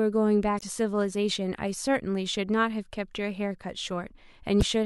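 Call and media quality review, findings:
Damaged data in a compressed stream, two events: 0.56–0.63 s and 4.59–4.63 s. Short chirp, squawk, click or hole in the speech, about 70 ms and 45 ms. Component: decoder input. Mechanism: corrupted frame bytes, decoder misreads frames and resyncs on the next valid header. Distinguishing point: a decoder misread rather than the smeared repeat that packet loss concealment leaves.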